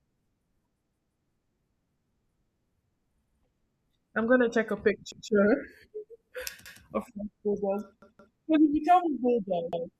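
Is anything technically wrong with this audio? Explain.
Yes. The speech stutters six times, with a short fragment replaying in a loop and a hard join at each restart: at 0.85 to 1.2 s and 8.02 to 8.36 s the fragment repeats twice, and at 3.24, 5.12, 6.66 and 9.73 s it repeats once. This is a repeated buffer. New audio arrived late, so playback resent the last block of about 170 ms, which fits an 8192-sample buffer. The stream then resumes where it left off.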